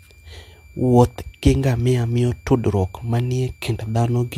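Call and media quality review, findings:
Switching supply whistle, whole clip. Thin high tone wandering between 2.34 and 2.39 kHz, sitting roughly 35 dB under the speech. Probably a supply in audible burst mode, its pitch drifting as load shifts.

Transcoding between lossy codecs, whole clip. Two different flavours of codec smear layered on each other, nothing above 16.5 kHz. Sounds like an MP3-style encode around 96 kbit/s, likely re-encoded to HE-AAC near 48 kbit/s, with each pass compounding the last.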